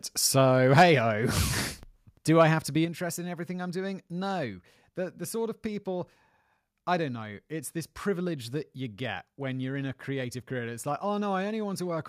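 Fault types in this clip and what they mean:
Microphone overload: The loudest peaks hit the converter's ceiling and get flattened, giving a harsh, crackly edge, likely from the mic input being set too hot. You hear it at 0.73 to 0.83 s, where peaks run about 6 dB past the limit and roughly 7% of the samples in that stretch are squared off. It returns more mildly, about 1 dB over, at 2.40 to 2.43 s, right before "have to be interested".
Microphone volume stepped down: Here the whole level of the speech and the background drops at once, in a single clean step rather than a fade. That pattern points to software lowering the input gain after catching a too-hot signal. It happens three times: about 2 dB at 0.82 s, just as the first distorted burst ends, then about 3 dB at 1.83 s, and about 4 dB at 2.85 s, between "have to be" and "interested in everything I'm".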